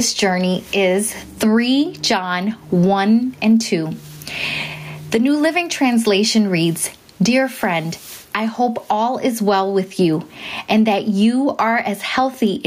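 Gain pumping runs through the whole recording. The level drops each time the speech gets loud, a swing of around 20 dB. Loud and quiet passages sit at nearly the same level and the speech sounds squashed. The likely cause is input gain set far too high, with a fast limiter or compressor clamping it down on each loud syllable.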